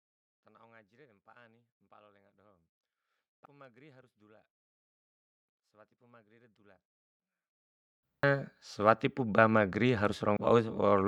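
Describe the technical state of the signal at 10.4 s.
At 10.37 s compressed frames are skipped: around seven 85.3 ms frames never play, so about half a second of speech vanishes and the audio jumps ahead. Unlike a dropout, there is no silent gap.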